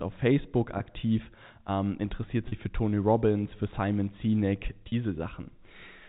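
At 0.78 to 0.80 s, 2.48 to 2.52 s just after "ähm interessiert", and 4.88 to 4.92 s, packet loss with pitch repetition briefly holds the sound on a slightly buzzy, frozen tone. The receiver filled each gap, about 20 ms then 40 ms twice, by looping the last pitch period, which fits one then two lost packets. A waveform shows repeated cycles fading in level, and a spectrogram shows flat, evenly spaced harmonics inside the 4 kHz telephone band of the G.711 coding.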